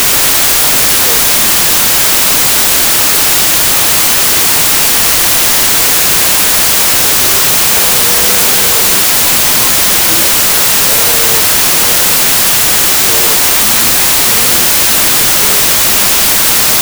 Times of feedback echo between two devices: none

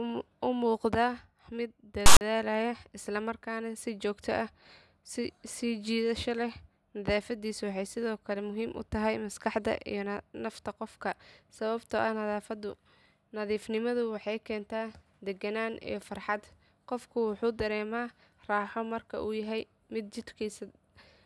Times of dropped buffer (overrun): none

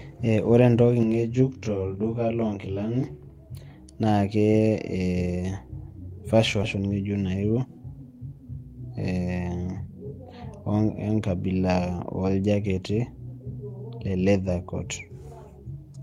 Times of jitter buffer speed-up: 7.29-7.65

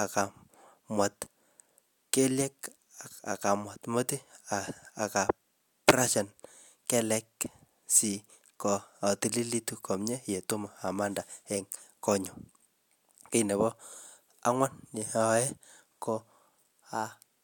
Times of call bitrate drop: none

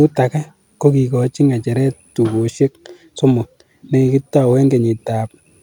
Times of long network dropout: none

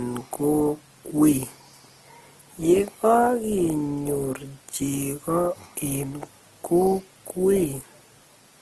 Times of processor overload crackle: none

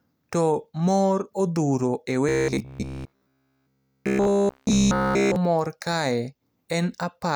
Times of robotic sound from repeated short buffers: 2.29-5.36

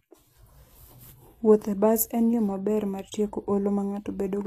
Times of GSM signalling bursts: none

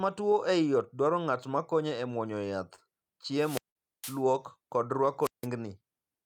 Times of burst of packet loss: 3.70-3.77

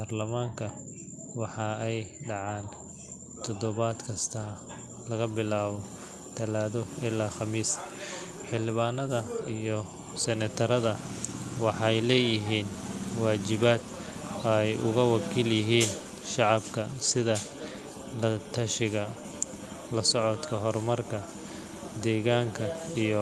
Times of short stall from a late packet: none

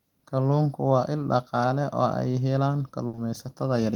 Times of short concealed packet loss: 3.15-3.19

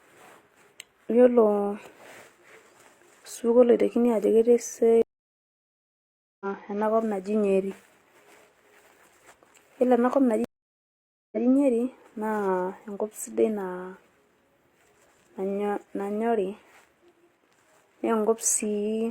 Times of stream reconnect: 5.02-6.46, 10.44-11.46

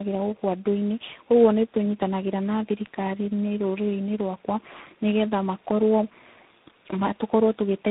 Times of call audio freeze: none

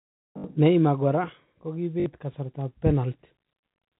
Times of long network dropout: none

